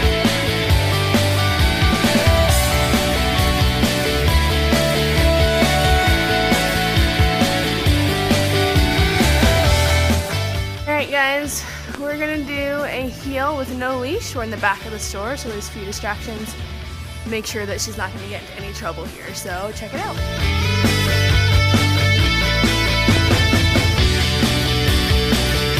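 Loud pops at 11.95–11.97 s and, doubled, at 23.17–23.33 s jump roughly 10 dB above the sound; likely a voltage pulse from a switch or static.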